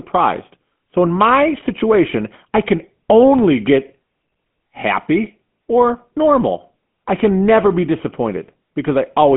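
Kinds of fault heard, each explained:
GSM full-rate codec: a vocal-tract model driven by sparse pulses gives this speech a plainly buzzy, gravelly edge, held to 150 Hz to 3.4 kHz throughout, consistent with 13 kbps.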